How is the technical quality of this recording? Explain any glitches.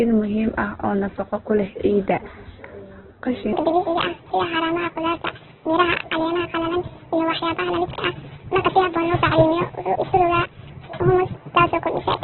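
The technical quality is poor, with two distinct faults.

Opus compression, throughout: the speech is rough and narrowband, with nothing above 4.2 kHz and heavy grainy, noisy texture. This is likely a very low-bitrate Opus encode, around 8 kbps, where the encoder runs out of bits, narrows the bandwidth and fills bands with noise.

Section at the wrong speed, from 3.53 s to the end: the speech suddenly turns high and hurried, about seven semitones up and 1.62 times faster. Speed and pitch rise together because this section was likely played back against the wrong clock.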